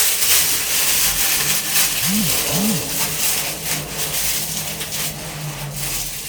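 No faults can be heard anywhere in the audio.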